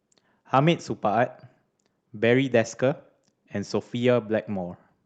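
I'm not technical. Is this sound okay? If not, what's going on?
Yes, no faults here: the speech comes through intact, with only the normal character of a call connection, whose top end stops around 8 kHz.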